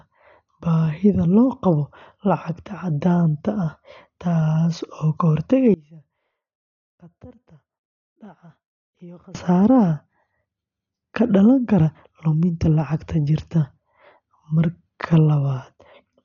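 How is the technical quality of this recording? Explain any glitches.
The technical quality is poor, with two problems in this speech recording.

From start to finish, the speech is dull and cut off above 7 kHz, with rough, fluttering noise clinging to voiced sounds. That points to heavy Dolby Digital compression at a very low rate, likely around 40 kbps. The encoder left many frequency lines without mantissa bits and the decoder filled them with dither noise. That noise fill, rather than the watery swirl of MP3, sets it apart.

From 5.74 to 9.35 s, the speech drops by about 26 dB to a faint residue, then returns. The likely cause is one channel inverted, so the centred voice cancels in the mono sum. Unlike a true dropout, a faint trace of sound remains rather than silence.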